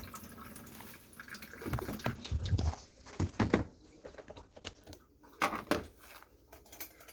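Everyday sound with a call bitrate drop from 1.84 to 4.89 s: the call's bandwidth estimate fell and the encoder was starved of bits, fitting a fall from 32 to 12 kbps. For nearly 3 s the audio turns coarse and watery, cut off above 8 kHz instead of 20 kHz.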